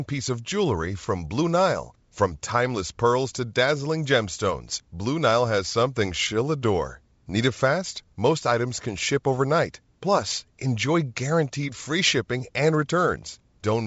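Nothing stood out on listening to this speech clip, which carries the band-limited sound of G.722 wideband telephone coding at 64 kbit/s, with nothing above about 7.7 kHz.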